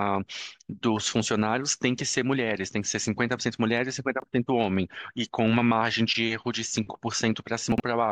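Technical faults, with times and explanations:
4.20–4.24 s: chunks out of order. One 20 ms chunk plays a single chunk late, so it swaps places with its neighbour. No audio is lost, but the sound steps forward and then back. The three hard joins this creates produce a smeared instant.
7.72–7.80 s: chunks out of order. Here a 20 ms chunk arrives three chunks late, so 60 ms of following audio plays before it. The longer displacement gives a jumbled moment.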